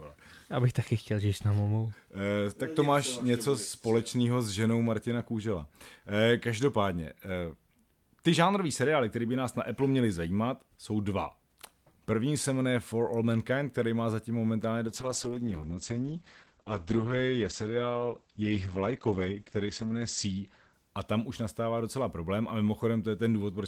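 From 14.89 to 22.27 s the speech turns muffled and watery, lasting about 5 s at worst: a call bitrate drop from 48 to 9 kbps narrowed bandwidth from 20 kHz to 8 kHz.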